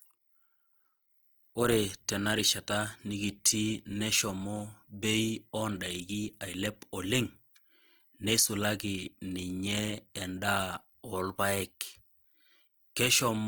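Speech, with Opus compression damage plainly audible throughout. The sound is rough, grainy and noisy, with tones losing their clean edges. Content reaches up to about 20.2 kHz, so the band stays full. The likely cause is Opus in its music mode at a low rate, which fits about 24 kbps.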